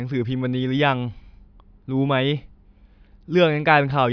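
No technical fault can be heard anywhere in the speech, and the signal stays steady and intact across the whole recording.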